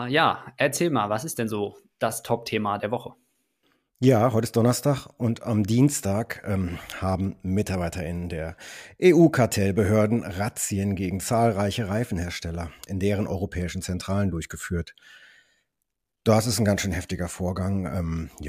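A speech recording with no technical faults to report. Nothing in it calls for a time or a cause to be noted.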